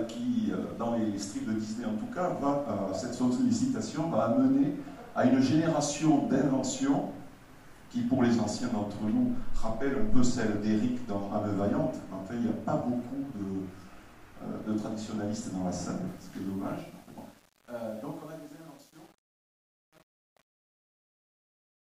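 From 16.07 s to the end, truncation distortion on a fade: the fade-out, undithered and consistent with 8-bit steps, turns gritty from 16.27 s rather than gliding down smoothly.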